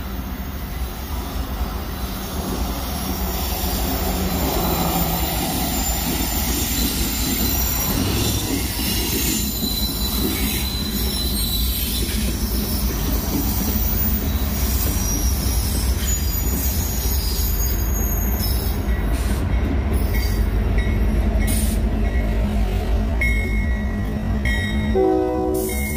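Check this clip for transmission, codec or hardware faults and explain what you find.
One fault stands out, a time-stretched section near the end. From 22.08 s to the end, the audio plays at roughly half speed, 0.51 times the original pace. The pitch does not drop with it. The likely cause is software stretching this part to fill a set length, repeating short pieces of the audio to hold the pitch. The slowdown begins abruptly. The stretched part drags.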